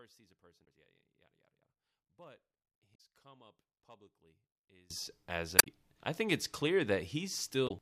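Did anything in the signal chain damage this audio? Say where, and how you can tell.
Yes, two separate faults. The first is one channel inverted, most likely a polarity reversal in the analogue wiring, such as swapped leads on one side. From 0.0 to 4.90 s, summing to mono cancels everything common to both channels. The centred speech drops by about 28 dB, leaving only a faint residue of whatever differs between left and right. After 4.90 s the full level returns.

The second is damaged data in a compressed stream, at the codec or storage stage. Corrupted bytes make the decoder misread frames, lose sync and hunt for the next valid header. This is heard as short chirps or blips at 0.61–0.67 s, 2.94–3.01 s, 5.58–5.67 s and 7.65–7.71 s, each roughly 60 to 80 ms long, with the audio picking up again once the decoder resynchronises.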